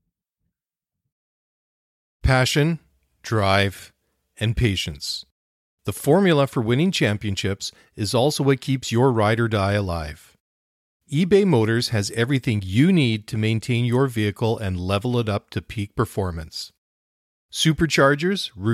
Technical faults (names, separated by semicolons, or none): none